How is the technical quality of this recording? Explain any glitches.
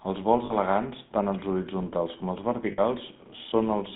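The technical quality is poor: the speech has passed through a GSM full-rate codec the whole way, and it suffers two short dropouts from lost GSM frames.

GSM full-rate codec: throughout, the speech was squeezed into a narrow telephone band of roughly 150 Hz to 3.6 kHz. It was rebuilt from a vocal-tract model driven by coarse, regularly spaced excitation pulses, which fits the 13 kbps full-rate coder. The result is plainly audible buzzy, gravelly roughness with no top end.

Lost GSM frames: at 0.46 to 0.55 s, just before "elegants tant els horitzontals", 40 ms of frames were lost. At 2.72 to 2.80 s, right after "els horitzontals com els", 60 ms were lost. Each time the decoder reused the last good frame, so the sound briefly freezes into a rough, metallic ring.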